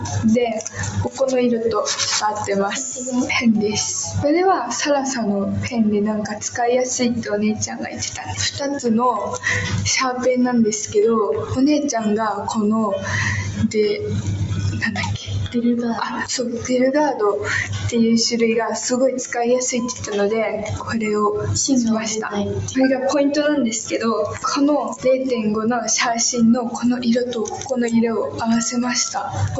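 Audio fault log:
Throughout: noise suppressor applied to music or sounds. A speech-tuned suppressor stays active on this non-speech audio. It treats sustained tones, ambience and reverb as noise. Level swings by roughly 5 dB, so held sound and tails pump and thin while attacks pass.
6.3–6.48 s, 7.6–8.34 s, 20.62–20.91 s, 27.5–27.73 s: sound cut by the noise suppressor. Four dips where the suppressor misjudged the sound as noise. Drops reach about 10, 9, 8 and 7 dB. Sustained or fading parts sink, and the 7.6 s dip lasts longest.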